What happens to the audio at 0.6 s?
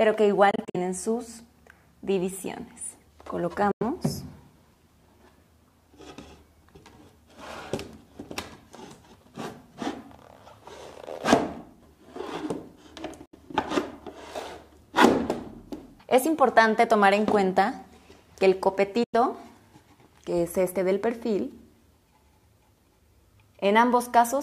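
Around 0.6 s the audio breaks up into a cluster of short silences between 0.51 and 0.76 s. About 116 ms of sound is missing, spread over roughly 232 ms, and the longest single gap is 46 ms. Each time it returns, the sound has moved on rather than picking up where it stopped. The likely cause is a Bluetooth dropout, with packets reaching the headphones too late and being discarded.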